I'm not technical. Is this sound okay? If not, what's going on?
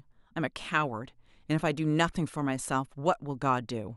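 Yes, this sound is okay; there's nothing going on with it that needs explaining.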